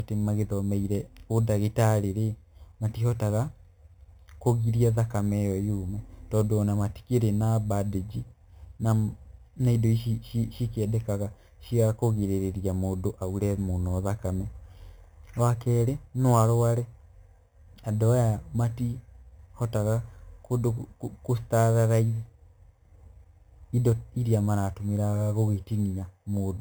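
From start to finish, the speech carries imaging from sample-and-hold upsampling: each original sample was simply repeated up to the new rate with no smoothing filter, which fits a source rate of 8 kHz. A bright metallic fizz rides on the voice, rising and falling with it. On a spectrogram, a mirror-image copy of the speech band fills 4 to 8 kHz, roughly 24 dB down, with pitch contours sloping the opposite way. Zoomed in, the waveform shows staircase steps.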